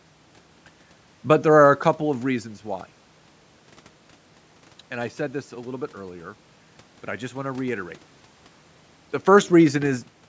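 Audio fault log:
Nothing stood out on listening to this speech.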